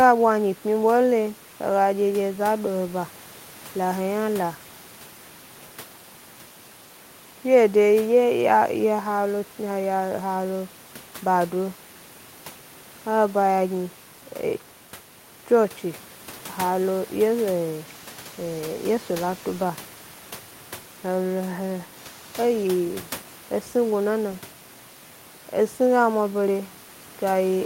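Speech recording with no technical faults to be heard.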